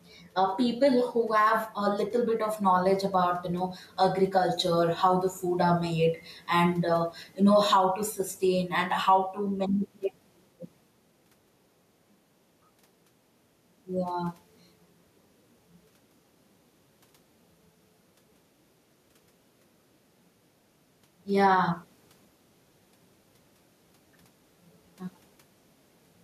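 A speech clip with gain pumping throughout. The gain swings by around 5 dB. Loud and soft passages sound squashed together. The likely cause is input gain set far too high, with a fast limiter clamping it. The room noise behind it sits about 45 dB below the speech.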